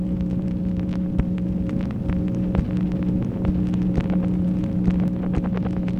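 The audio carries a doubled audio track from 1.64 s to 5.08 s: a second, full-band copy trails the original by about a second, around 5 dB quieter, with no decay or room colour, and it cuts in and out abruptly. The likely cause is a slower second capture path or misaligned edit.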